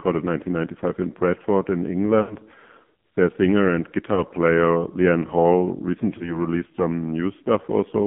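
From the start to the end, the speech runs through the AMR narrowband mobile codec, with the band confined to roughly 150 Hz to 3.5 kHz. The damage is heavy. The voice has a buzzy, synthetic edge, which fits a low rate near 5.9 kbps, where a vocal-tract model fed by sparse pulses replaces the real waveform. A plain telephone band-limit would sound muffled but stay natural. Here the tone itself is rebuilt.

From 2.22 to 2.36 s come lost AMR speech frames, about four of them, roughly 80 ms. The decoder repeats its last pitch and vocal-tract settings at falling gain, so the sound smears and sags toward silence instead of cutting off, then returns rough. Single-frame losses follow just after "their singer and" at 4.14 to 4.23 s and at 6.18 to 6.38 s, each heard as a brief warbling dip. That stretched, fading repeat is what separates frame concealment from a clean dropout.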